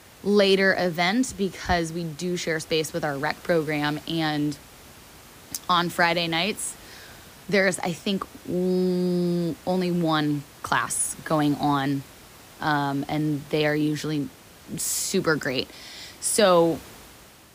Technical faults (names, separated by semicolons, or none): none